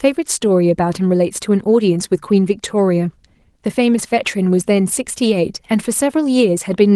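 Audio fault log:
No faults heard anywhere in the recording.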